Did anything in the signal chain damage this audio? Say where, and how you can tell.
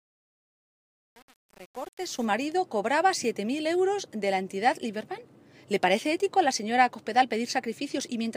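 Yes. The fade from 0.0 to 2.25 s was rendered in a gain or sample-format stage without dither, causing truncation distortion on a fade. The quiet end of the fade sounds gritty, with the waveform reduced to coarse steps, consistent with about 7 bits, then clears at 2.25 s.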